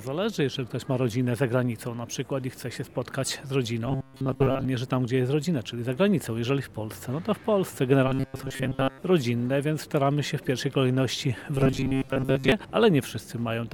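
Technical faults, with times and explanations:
3.86–4.65 s, 8.08–8.99 s and 11.55–12.52 s: robotic sound from repeated short buffers, likely from a starved stream looping a roughly 7.5 ms segment in place of most of the audio, giving a rigid metallic 134 Hz buzz.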